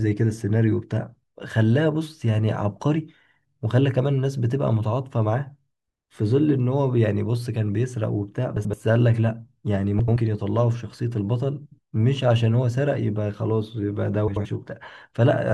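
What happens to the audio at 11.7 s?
Frames out of order at 11.66–11.79 s: two adjacent blocks of about 64 ms each are swapped, so the speech briefly flutters.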